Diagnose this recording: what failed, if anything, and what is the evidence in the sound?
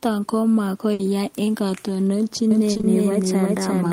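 Burst of packet loss, 0.93 to 1.01 s, network stage. Just before "yaak eng", the decoder extends the last speech for about 60 ms as a fading held sound, then resumes with roughly 60 ms of speech simply gone, so the phrase jumps forward.

Doubled audio track, from 2.51 s to the end. A second full-band copy of the speech runs roughly 0.4 s behind at about the same level, with no reverberant tail and an abrupt entry. This is likely a second, slower capture path or an edit holding two misaligned copies.

Short concealed packet loss at 2.73, 2.77 and 2.81 s, network and codec stage. Three consecutive 40 ms holes each get about 20 ms of synthesized continuation before skipping ahead. The result is a brief smeared wobble across 2.73 to 2.85 s, with small fragments of speech dropped.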